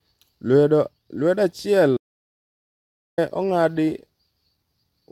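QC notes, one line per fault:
1.97 to 3.18 s, audio dropout to silence: the speech cuts off mid-flow and about 1.2 s of silence follows, with no room tone at all, before it picks up again. That points to the input likely dropping out while the recorder kept writing silence.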